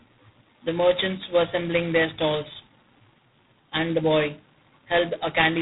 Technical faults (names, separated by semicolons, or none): G.726 ADPCM